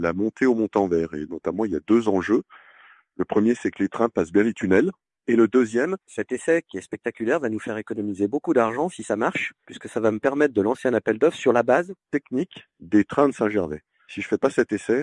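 From 5.85 s to 12.04 s the audio shows a wrong sample rate fault. It plays back faster than it was captured, with no rate conversion in between. Speed and pitch rise together by a factor of 1.09, about 1.5 semitones higher. That ratio fits material recorded at 22 kHz and played at 24 kHz. The sound turns brighter and slightly rushed. Timing tightens across the section. At 12.04 s normal speed and pitch return.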